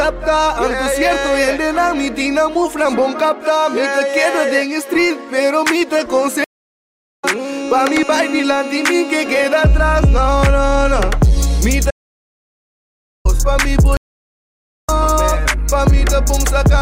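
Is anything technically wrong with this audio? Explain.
Yes, there are three interruptions of two kinds.

At 6.44 to 7.25 s and again at 13.97 to 14.89 s there is a stream reconnect. The connection broke, the player fell silent for 762 ms and then 882 ms, and a fresh decoder picked up mid-stream. Each time the sound resumes later than where it stopped, by roughly 0.7 s and roughly half a second, so material is skipped.

From 11.91 to 13.25 s there is an audio dropout to silence lasting 1.34 s. The sound cuts off abruptly into silence with no room tone, then returns mid-flow. This likely comes from a lost input, with the recorder writing silence until the signal came back.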